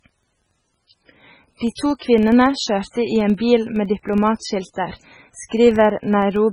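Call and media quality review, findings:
Heavy codec damage throughout, watery and swirly speech, smeared consonant onsets, metallic chirps on s sounds. Likely MP3 compression at a very low bitrate, around 16 kbps. The encoder starves weak frequency lines so they flicker frame to frame. Unlike a plain low-pass, which only dulls the sound, this also produces the time-varying swirl and chirps.

Steady 21.5 Hz tick-buzz for the whole clip, louder on loud syllables and fading in pauses. Filter restarted on every block, consistent with a 2048-sample block at 44.1 kHz. State is cleared at each block boundary, so every block opens with a small transient. Unlike mains hum, it tracks signal level and stops in silence.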